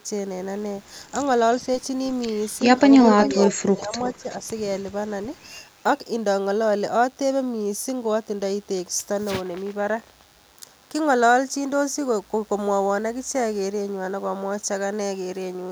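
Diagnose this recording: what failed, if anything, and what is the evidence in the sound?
DECT cordless phone buzz, analogue wiring stage: a steady, thin buzz at 100 Hz, about 35 dB below the speech, runs throughout. It is harmonic-rich from rectified radio bursts, not a smooth mains hum.

Echo leak, call processing: a delayed copy trails the speech by about 366 ms, at 3.05–3.33 s (about 10 dB down) and 4.03–4.36 s (about 25 dB down). This is likely residual loudspeaker echo. A discrete repeat, not reverberant smearing.

Speech suppressed in double talk, call processing: the speech dips up to about 30 dB at 3.35–3.94 s and about 10 dB at 4.17–4.42 s. The likely cause is the echo canceller ducking during overlap. These are gain dips rather than packet-loss gaps.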